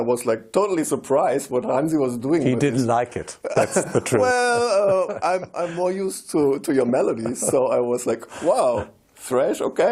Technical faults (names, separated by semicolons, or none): none